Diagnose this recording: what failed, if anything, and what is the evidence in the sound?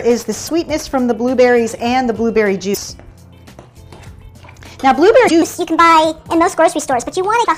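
Damaged data in the compressed stream, codec stage, causes brief glitches at 0.47, 2.71, 5.24 and 7.41 s; corrupted frames make the decoder lose sync and skip ahead.

A section at the wrong speed runs from 5.42 s to the end at 1.35 times normal, about five semitones higher, likely from playback on a mismatched clock.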